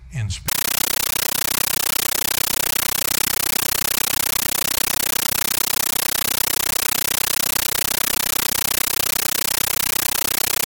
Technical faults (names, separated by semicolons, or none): compressed stream played as audio